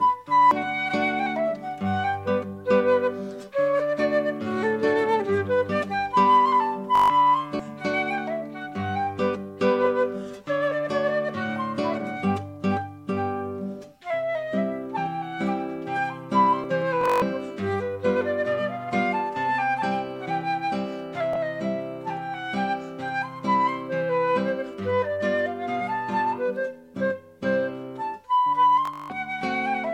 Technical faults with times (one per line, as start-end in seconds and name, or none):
0.51 dropped buffer (overrun)
6.95-7.10 Bluetooth stutter
7.59 dropped buffer (overrun)
16.64 dropped buffer (overrun)
17.01-17.22 Bluetooth stutter
21.33-21.36 Bluetooth stutter
28.85-29.10 Bluetooth stutter